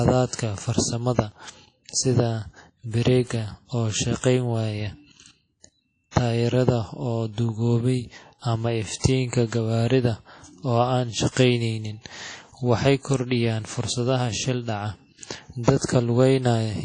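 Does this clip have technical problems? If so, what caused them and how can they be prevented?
Yes. The speech sounds washy and ringing, with hiss breathing with the signal and nothing above 10.1 kHz. This is likely WMA compression at a low bitrate, around 32 kbps. On a spectrogram it shows as a hard ceiling and patchy, blotchy upper bands. Prevent it by encoding at a higher bitrate or archiving losslessly.

Pre-echo appears at 4.18–4.24, 6.11–6.16, 8.99–9.04 and 15.63–15.67 s. Block-wide quantisation noise leaks roughly 43–53 ms ahead of sharp attacks. A waveform shows fuzz before each onset, and a spectrogram shows a broadband smear. Prevent it with a codec that switches to short blocks on transients.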